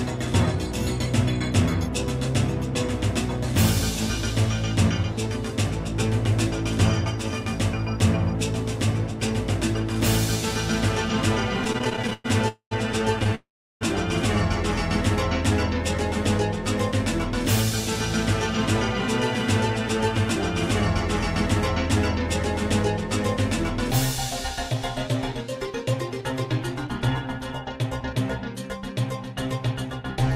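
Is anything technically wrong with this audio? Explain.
Yes. The audio has network-delivery faults: bursts of stutter, two freezes, and a later stretch that runs fast.

Repeated stalls (stutter), 11.64–12.26 s and 13.19–13.33 s: late packets emptied the jitter buffer 14 and then 4 times, with gaps up to 110 ms. Those gaps were filled by repeating the last sound, which makes it drag and hiccup. A spectrogram shows smeared, repeated frames.

Call audio freeze, 12.48–12.73 s and 13.35–13.83 s: the audio stops, buzzes briefly, then fades to silence for about 100 ms and 350 ms before resuming where it left off. This is likely held-up packets. On a waveform each appears as a flat gap.

Jitter buffer speed-up, 23.88–28.14 s: the receiver trimmed short pitch-period slices, about a fifth of a second in total, to shrink its backlog. The sound plays at 105% speed at unchanged pitch, so it seems slightly hurried. 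Its spectrogram shows tiny seams.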